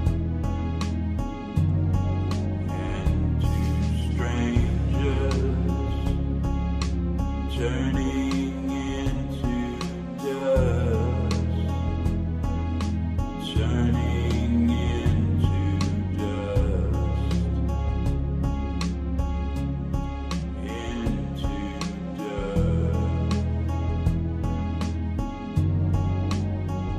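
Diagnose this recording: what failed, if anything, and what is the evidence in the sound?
The failure is in the codec stage: a corrupt frame concealed by the AAC decoder, twice. At 9.13 to 9.16 s one damaged frame was concealed. At 20.39 to 20.43 s a slightly longer span covers two. The decoder detected flipped bits and either muted the frames or filled them with a scrambled copy of the last good spectrum. Undetected corruption would squeak or click instead, and a network dropout would shift timing.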